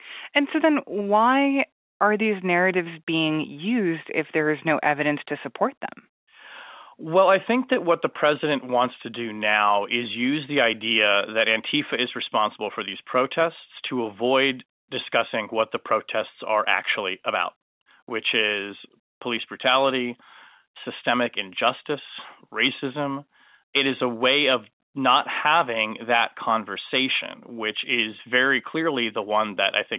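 The speech sits in the narrow telephone band, consistent with 8 kHz mu-law G.711 coding, and no technical fault can be heard anywhere in it.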